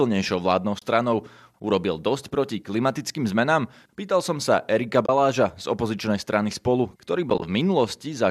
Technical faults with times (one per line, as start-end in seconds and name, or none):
0.79-0.82 AAC frame loss with muting
5.06-5.09 AAC frame loss with muting
7.29-7.42 AAC frame loss with muting